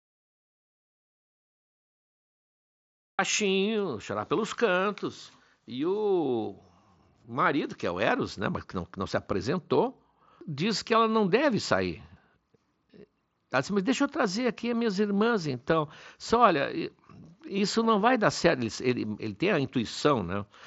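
From the very start until 3.19 s the recording holds silence, an audio dropout to silence already under way when the clip begins. The input was likely lost while the recorder kept writing silence. Unlike a quiet lead-in, there is no room tone or noise floor at all, and the speech enters abruptly once the signal returns. After that the sound comes through the Bluetooth mSBC headset path, with nothing above about 7.7 kHz.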